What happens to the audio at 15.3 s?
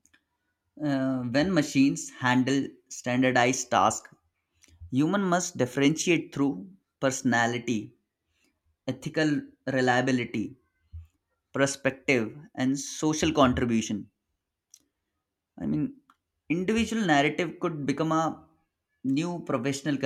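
Nothing goes wrong at 15.3 s; the audio plays through that moment intact, with no dropout, click, distortion or other fault.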